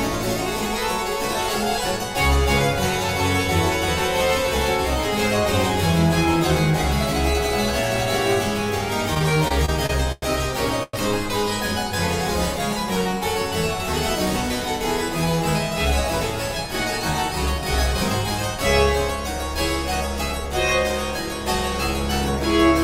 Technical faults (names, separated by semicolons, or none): repeated stalls (stutter); call audio freeze